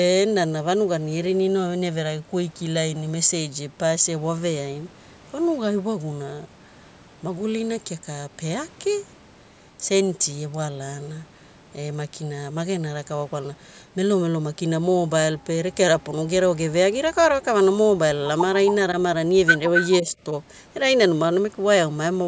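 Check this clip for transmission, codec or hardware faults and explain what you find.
Two call-path faults turn up close together near the end of the clip, both pointing to an echo canceller struggling on a loudspeaker connection.

Echo leak, 19.76 to 19.94 s: a short, delayed copy of the speech sounds about as loud as the original and trails it by roughly 270 ms. The likely cause is an echo canceller on a speakerphone side that failed to subtract what its microphone picked up from the loudspeaker, so that residue was sent back down the line as an audible repeat.

Speech suppressed in double talk, 20.02 to 20.16 s: the speech briefly sinks, by around 5 dB at its deepest, for about 150 ms, and sounds pulled back rather than cut. This likely comes from both sides talking at once, when the canceller could not tell the local talker apart from the returning echo and turned the whole signal down to stay safe, taking the wanted speech with it.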